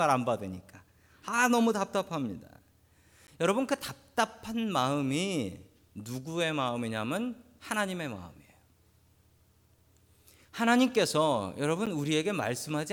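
A speech recording with two short blocks of digital silence, at 3.27 s and 11.86 s. Each is a dropout of about 10.7 ms, which fits a 512-sample buffer going unfilled. The signal cuts out and back with no fade, so each comes across as a tick or a dip rather than a silence. On a waveform each shows as a brief near-flat gap. On a spectrogram it is a thin blank column.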